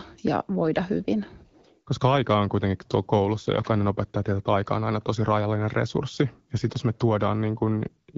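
Nothing here stands out as a technical fault; the speech comes across as you'd expect from an HD Voice call carried over AMR wideband at 12.65 kbit/s.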